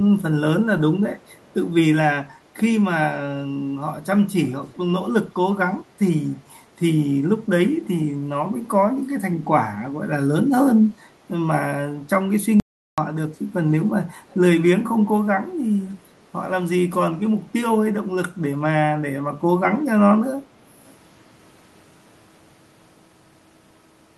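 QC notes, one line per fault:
1.35–1.53 s and 9.02–9.07 s: echo leak, a very faint copy of the speech trailing by about 0.32 s, likely far-end loudspeaker sound the echo canceller failed to remove.
12.60–12.98 s: audio dropout to silence, with sound cutting to silence for about 378 ms with no room tone, likely from the input being lost while recording continued.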